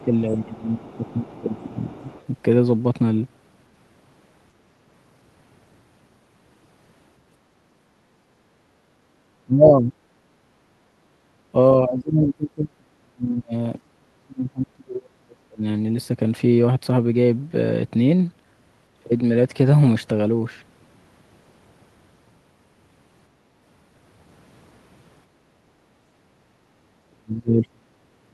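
A speech recording with three echo-canceller faults. The other side's voice leaking through appears in short scraps at 0.00 to 0.04 s, 0.82 to 1.40 s and 1.98 to 2.25 s. It sits about 25 dB below the talker. It is faint. It is likely loudspeaker playback of the far end reaching the microphone. The canceller has not fully subtracted it. Speech suppressed in double talk is the heaviest fault. The talker's level dips from 0.02 to 2.05 s, by about 15 dB at most, over roughly a second and a half. Deeper dips follow at 9.44 to 9.96 s, about 30 dB, and at 11.52 to 15.64 s, about 35 dB. There the voice is turned down for around three seconds in total. Another dip of about 35 dB comes at 27.06 to 27.92 s. The likely cause is both sides talking at once. The canceller cannot tell the local voice from the echo, so it turns everything down. Background gated by the echo canceller occurs at 25.27 to 25.84 s. 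The room sound drops by about 6 dB for about half a second, then returns. The canceller clamps the microphone while the loudspeaker plays and releases it afterwards.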